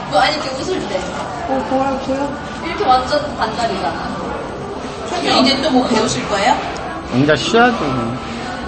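MP3 compression, throughout: nothing survives above 8.3 kHz and the sound turns watery and swirly, likely from an MP3 encoder starved of bits, fitting roughly 32 kbps.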